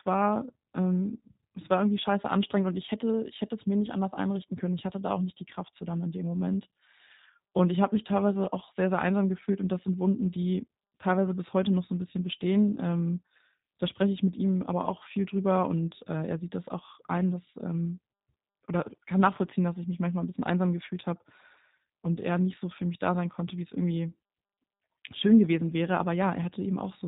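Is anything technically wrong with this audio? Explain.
Yes, the speech has been through low-bitrate voice coding. The G.729 codec runs for the whole clip, and the plainly audible roughness fits an 8 kbit/s G.729A link. Each 10 ms frame is rebuilt from a vocal tract filter, a pitch predictor and a few pulses, so the speech sounds slightly buzzy and synthetic. A spectrogram shows a hard ceiling at 4 kHz, with the fine harmonic detail below it smeared.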